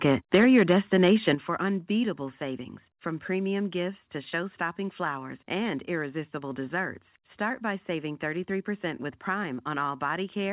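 Microphone overload runs from 0.06 to 1.29 s in this speech recording. The loudest syllables have a harsh, crackling edge, with peaks pushed about 6 dB past the converter's limit so their tops are sheared flat. Only a small share of samples, around one or two percent, is affected. This is likely an input gain set too high for the converter. Microphone volume stepped down is heard at 0.35 s, 1.35 s and 2.37 s. The voice and the background drop together by about 3 dB, then about 8 dB, then about 2 dB. Each drop is abrupt rather than a smooth fade, and the first two land during or just after the distorted stretch. The likely cause is the call software cutting the device's input level in single steps in response to the clipping. The whole clip is band-limited to 4 kHz by the G.711 call path.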